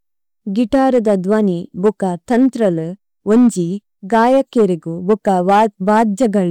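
Hard clipping cuts speech peaks flat at 0.74–1.41, 1.85–1.89, 2.32–2.69, 3.31–3.48, 4.13–4.65 and 5.10–6.39 s. The signal overdrives the stage by about 3–5 dB, adding harsh crackling harmonics.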